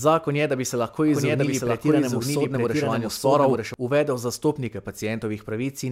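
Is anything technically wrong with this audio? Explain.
Yes, there's a doubled audio track from 1.08 to 3.74 s, starting after "da bi se lahko" and ending before "uvedel zastopnike". A second copy of the speech runs about a second behind at roughly the same level, with no room colour, and cuts in and out abruptly. It's likely a slower second capture path or two misaligned copies left in an edit.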